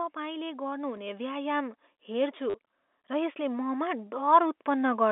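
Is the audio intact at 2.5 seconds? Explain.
No. At 2.50 s there's a short packet loss with the last packet repeated, running to about 2.54 s, so roughly 40 ms of audio is missing. Instead of leaving a gap, the receiver kept replaying the last chunk it got, so you hear a brief robotic stutter with a buzzy edge, which fits four 10 ms packets buzzing at around 100 Hz.

That moment also sits inside a slow automatic gain rise that runs from about 0.13 s to 5.07 s. The gain control decided the input was too quiet and kept turning it up, by about 11 dB over the whole stretch. Because it lifts everything together, the speech and the background both swell steadily rather than jumping. At 2.5 s you're partway up that ramp, so the stutter lands on a level that's still climbing.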